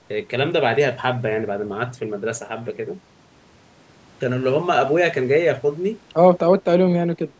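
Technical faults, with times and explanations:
6.5–7.39 s, speech suppressed in double talk: the speech dips as much as about 35 dB and breaks up, likely from the echo canceller muting the talker during far-end speech.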